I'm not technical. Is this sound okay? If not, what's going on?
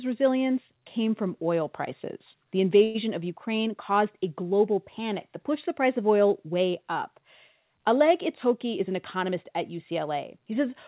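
No. At 2.84 to 2.97 s there is a call audio freeze: a short fading buzz fills about 0.1 s, likely because packets stalled, and then the speech resumes where it stopped, with nothing lost as there would be in a dropout. From 8.65 to 9.45 s a jitter buffer speed-up plays the speech about 6% faster by trimming roughly a twentieth of a second in tiny pieces. It sounds hurried, but the pitch stays the same, unlike a sped-up recording.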